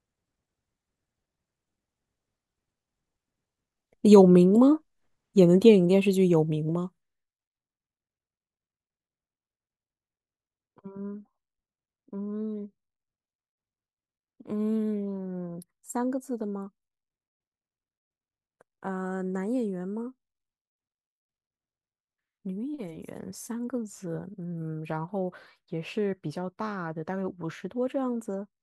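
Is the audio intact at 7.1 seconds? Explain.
No. At 7.1 seconds the speech is inside a burst of zipper noise from 6.44 to 7.22 s. The level drops by about 15 dB in unsmoothed steps, roughly 150 per second, and each step clicks, giving a rapid ticking zip. A waveform shows a staircase envelope, and a spectrogram shows dense, evenly spaced faint vertical lines.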